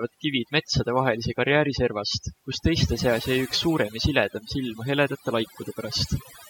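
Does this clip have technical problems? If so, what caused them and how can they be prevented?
Yes. Overdone noise removal affects the whole speech clip. A noise reduction stage set far too aggressively is pulling individual frequency bands down to almost nothing whenever their level sits close to its noise estimate, and the softer components of the voice are being cut along with the noise. The gaps between phrases collapse into near silence dotted with twinkling specks. Prevention: apply gentler reduction, judged by ear against the unprocessed recording.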